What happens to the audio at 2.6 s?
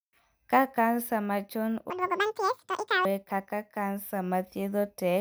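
At 2.6 s the speech is in the middle of audio read two samples at a time (double speed), which runs from 1.90 to 3.05 s, just after "kansa machon". Each pair of samples is taken as one frame, so the passage plays at 2x speed and a full octave (12 semitones) higher. Unlike a pitch shift alone, tempo and pitch rise together.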